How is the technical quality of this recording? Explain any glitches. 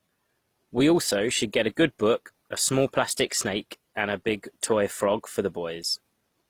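Quality is degraded throughout the speech by compounded compression. The whole clip has two sets of coding artefacts heard layered together. This is likely transcoding between lossy codecs, consistent with HE-AAC then Opus at about 32 kbit/s each. A spectrogram shows blotchy high bands and nothing above 20.4 kHz.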